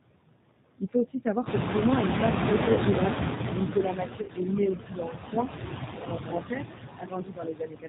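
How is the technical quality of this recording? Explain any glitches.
Technical quality is poor: the audio carries a DC offset, constant noise-suppressor processing and plainly audible G.729 coding damage, plus timed dropouts from the suppressor and from packet loss.

The DC offset runs through the whole clip. The waveform sits shifted off zero by a constant amount, so it rides above or below the centre line instead of swinging symmetrically. It cannot be heard as such, but it shows as steady energy right at the bottom of the spectrum and eats into the available headroom, leaving less room before peaks clip on one side.

Noise suppressor artifacts are present throughout, with the background pulled down by about 17 dB. The suppressor estimates which frequency bands hold steady noise and attenuates them frame by frame, so the noise sinks in pauses and comes back up under the speech.

The G.729 codec damage is plainly audible across the clip, and the sound points to G.729A at 8 kbit/s. 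This codec models speech with a vocal tract filter, a pitch predictor and a sparse pulse excitation rather than coding the waveform itself. Nothing above 4 kHz survives, so the speech is band-limited and muffled at the top, with a rough, slightly synthetic texture. The background noise warbles as the model tries to fit it.

Speech cut by the noise suppressor occurs at 0.78 to 0.95 s, just before "aussi savoir", then at 3.92 to 4.5 s, 4.75 to 5.51 s, and from 6.97 s to the end. The deepest drops are about 19, 16, 17 and 21 dB. The affected portions add up to roughly a tenth of a second, a third of a second, half a second and a full second. In each, the suppressor misread speech energy as noise and turned it down with the background. Soft consonants, word endings and the quiet closing stretch sound swallowed or faint.

The noise suppressor catching up runs from 1.45 to 4.04 s, just after "aussi savoir". 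Around 1.5 s the room noise jumps by about 14 dB and settles roughly 8 dB below the speech. The suppressor's noise estimate lags behind this jump. For about 2.6 s the noise comes through with only about 12 dB of reduction, audibly louder than elsewhere, before it sinks as the estimate adapts.

VoIP packet loss concealed by the speech codec appears at 2.72 to 2.79 s and at 4.22 to 4.30 s. The first gap is 40 ms, which fits two 20 ms packets, and the second is 60 ms, which fits three. For the missing frames, the decoder extrapolates from its last pitch and filter state while lowering the gain. The result is a brief buzzy, stretched tone or coloured noise that fades out. Because each frame builds on the previous one, the speech stays weak or distorted for a short while after the packets resume. The second gap falls inside the 3.92 to 4.5 s suppressor cut, compounding the loss there.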